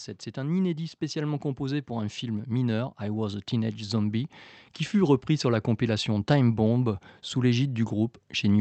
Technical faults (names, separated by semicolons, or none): automatic gain rising